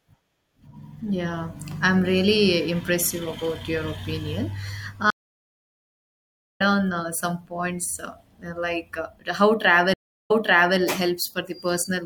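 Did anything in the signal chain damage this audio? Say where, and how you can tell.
Yes, at the network stage. There are two stream reconnects. At 5.10 s the speech goes silent for about 1.5 s and resumes roughly a second further on, skipping material. At 9.94 s a shorter 0.36 s silence ends with the audio picking up 0.48 s earlier, repeating what was just heard. The connection dropped and a fresh decoder restarted mid-stream each time. The timeline jumps forward or back, which a simple packet-loss dropout never does.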